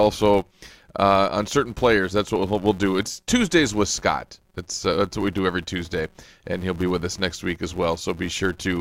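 A speech recording with a filter restarted on every block throughout: each block begins from silence, so a small transient repeats at about 188 Hz, which fits a 256-sample block. Unlike steady mains hum, this buzz rises and falls with the speech level.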